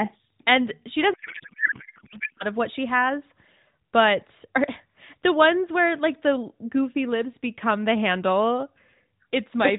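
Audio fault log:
1.14–2.44 s, codec payload misread: the receiving decoder unpacks the AMR bits in the wrong layout, consistent with octet-aligned frames being parsed as bandwidth-efficient, so every field lands in the wrong slot while the frames still look valid. For about 1.3 s the speech gives way to garbled noise and warble that barely tracks it, until correct decoding resumes just before "of what she has". Outside this span the narrowband AMR speech carries only light coding damage.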